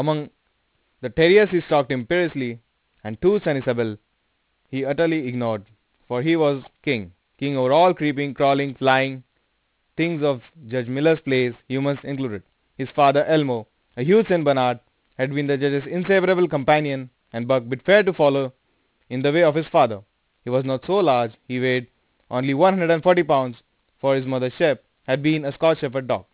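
Aliasing runs through the whole clip. The speech was downsampled without an anti-alias filter, so energy above 4 kHz folds back below it, roughly 25 dB under the speech, which fits a drop to an 8 kHz rate. Sibilants sound gritty and metallic, with the spectrum packed hard against the band edge.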